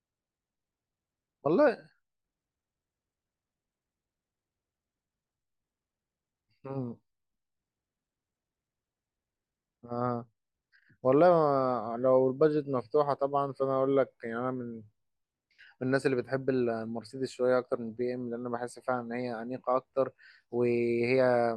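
Nothing goes wrong anywhere in this bit of speech, so there's no technical fault to point to at any moment.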